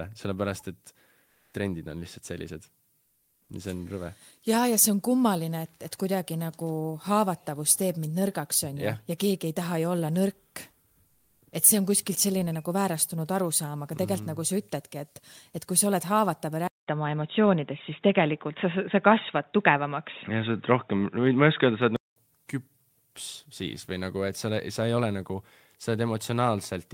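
Three short gaps carry comfort noise in place of the background: 1.25 to 1.53 s, 3.01 to 3.49 s, and 11.07 to 11.41 s. The real background drops out. A flat, featureless hiss fills it instead, about 2 dB louder first, then about 2 and 3 dB quieter. Discontinuous transmission is the likely cause.

At 16.68 s the input likely switched to a poorer device. A 200 ms silence marks the switch. Then nothing passes above 3.8 kHz. The sound turns dull and boxy, somewhat louder, over a new faint noise floor. It clears again at 22.16 s.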